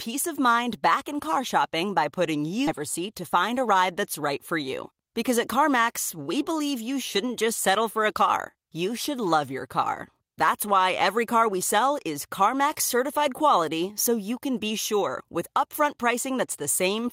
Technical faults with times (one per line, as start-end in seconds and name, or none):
2.67 skip ahead
2.79-4.21 jitter buffer speed-up